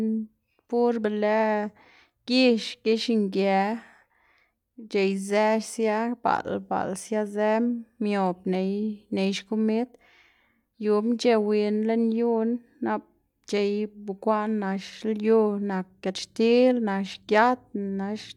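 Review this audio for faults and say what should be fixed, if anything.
No faults; nothing to fix.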